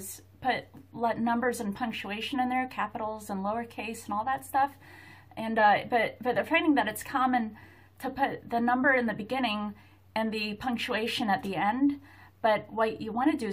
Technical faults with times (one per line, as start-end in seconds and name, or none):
none